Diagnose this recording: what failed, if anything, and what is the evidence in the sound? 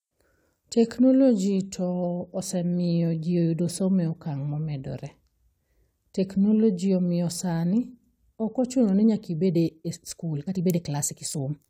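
From 9.34 s to the end, just after "okochuno ni nyaka", the speech jumps to about 1.53 times its pace and sounds rushed while its pitch holds steady. This is a time-stretched section, likely from software compression in post-processing. A simple speed-up would raise the pitch too.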